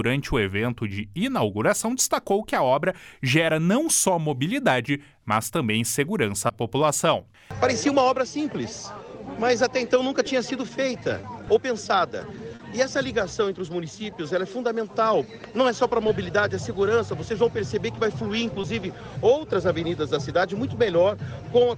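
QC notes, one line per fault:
6.47–6.51 s, 11.21–11.25 s, 12.55–12.61 s and 18.61–18.65 s: short concealed packet loss. About 20 ms of audio arrived too late each time, and 40 ms at 12.55 s. The receiver extended the preceding sound to cover each gap, then blended back, leaving a brief smear or wobble.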